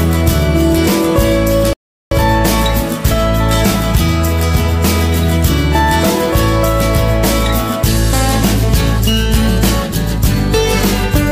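At 1.73 s the audio just drops out and stays silent until about 2.11 s, a gap of roughly 0.38 s, which is long enough to clearly hear as a hole rather than a click. That's a playback stall. The player likely either ran dry of data or had its thread held up, so nothing reached the output until it caught up, and then the sound picks back up after the pause.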